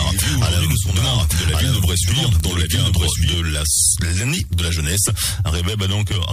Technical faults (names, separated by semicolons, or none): doubled audio track; sample clock jitter